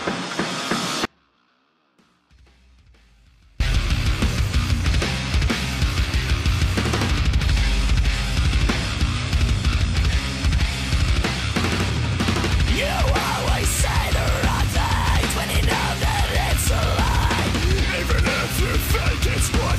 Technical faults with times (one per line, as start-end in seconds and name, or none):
1.05-3.60 audio dropout to a faint residue